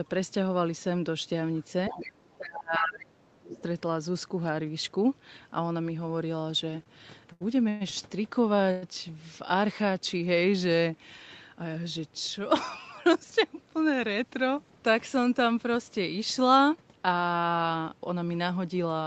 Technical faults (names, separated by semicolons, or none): other side's voice leaking through; speech suppressed in double talk; short stall from a late packet; call audio freeze